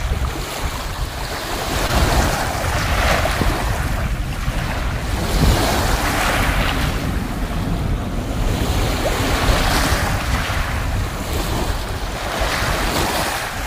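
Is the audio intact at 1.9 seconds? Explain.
No. Between 1.87 and 1.91 s there is a brief smear or wobble where the sound blurs for a moment before settling back. This is short concealed packet loss: about 20 ms of audio never reached the decoder in time, and the receiver covered roughly 13 ms of that gap by extending the preceding sound, then blended back into the real signal. The patch hides the hole but leaves this small audible seam.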